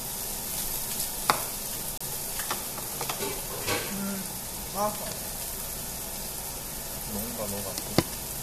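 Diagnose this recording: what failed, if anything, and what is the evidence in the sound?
Playback failed at a segment boundary: the time stamps of two consecutive stream segments leave a gap between stream segments, which the player fills with silence. A hard-edged hole of about 30 ms cuts the sound from 1.98 to 2.01 s, where one 2-second segment hands over to the next; nothing is lost, the timeline just stretches.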